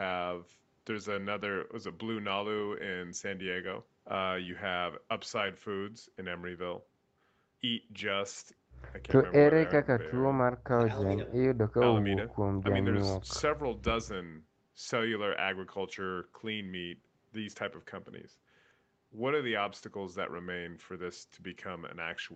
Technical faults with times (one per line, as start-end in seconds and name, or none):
none